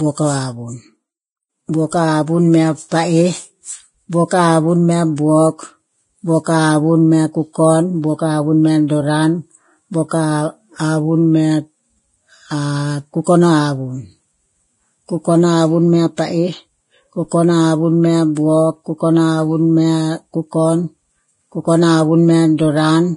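Throughout the speech, nothing is present above about 10.6 kHz, and the remaining treble sounds hissy and grainy, with roughened tones and smeared consonant attacks. The damage is heavy, and the likely cause is Vorbis compression at a low setting, consistent with a rate around 28 kbps. At that level the encoder pulls its cut-off down and quantises the upper residue so coarsely that fine high-frequency detail is replaced by noise of similar energy.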